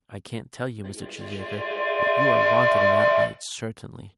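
A speech recording in which two devices on the same call form a feedback echo loop: one plays back what the other's microphone captured, and that microphone picks it up again, beyond the reach of either echo canceller. From 0.84 to 3.57 s, each word returns about every fifth of a second, thinner and ringing, building to about 9 dB above the speech.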